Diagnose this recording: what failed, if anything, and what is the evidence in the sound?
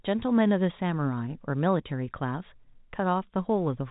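Nothing in this speech recording stood out as a failure on listening.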